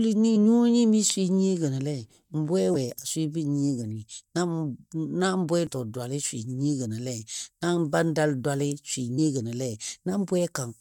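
Brief glitches at 0.35, 2.74, 5.67 to 5.69 and 9.17 s mark damaged data in the compressed stream, where corrupted frames throw the decoder out of sync.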